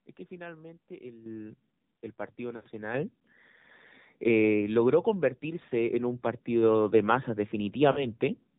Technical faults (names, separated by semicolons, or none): AMR narrowband mobile codec; lost AMR speech frames